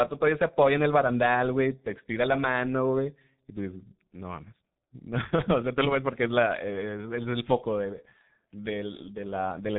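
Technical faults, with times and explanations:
Throughout, G.723.1 codec damage: the speech is muffled and hoarse, with nothing above about 3.8 kHz, so the sibilants and the crisp edges of consonants are gone and smeared together. The codec squeezes each chunk of speech into a coarse voice model that only refreshes every 30 ms or so, so quick changes in the sound lag and blur. The heavy roughness fits a bitrate of around 6 kbit/s.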